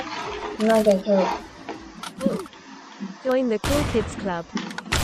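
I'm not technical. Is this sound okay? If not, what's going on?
No, there are periodic USB or driver dropouts: tiny silent gaps every half second from 1.32 to 3.81 s, heard as regular ticks.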